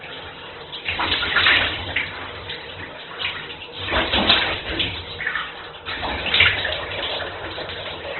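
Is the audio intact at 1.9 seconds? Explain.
No, at 1.9 seconds, as across the whole clip, the sound is muffled with nothing above about 4.2 kHz, and tones come out grainy and rough. That's likely Opus compression at a starved rate, around 12 kbps, filling bands with noise and narrowing the bandwidth.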